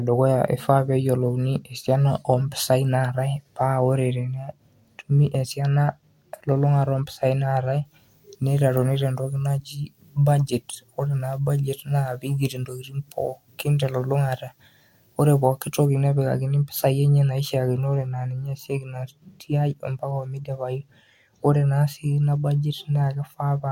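Speech, with pre-emphasis left on from 7.85 to 15.85 s, starting just after "ompisai naatae": a treble boost fitting the 50 µs FM curve was applied without the matching de-emphasis, so 10 kHz sits about 10 dB above 1 kHz, leaving the audio thin, bright and sibilant.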